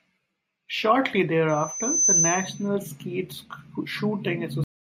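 From 1.49 to 2.68 s a loudspeaker feedback squeal rises at 6.1 kHz: the microphone-speaker loop exceeds unity gain there, swelling over half a second to sit a few decibels above the speech. At 4.64 s the speech hits a cut-off end, dropping straight to digital silence with no decay because the final buffers were never played out.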